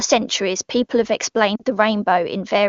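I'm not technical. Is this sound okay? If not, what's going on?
No. Lost AMR speech frames cause a brief drop to near silence from 1.55 to 1.62 s, which fits two lost frames. A radio error spoiled those bits of speech, so the phone filled the gap by repeating the last good sound while fading it down.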